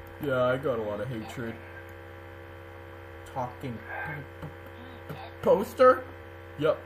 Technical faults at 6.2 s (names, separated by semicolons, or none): compressed frames skipped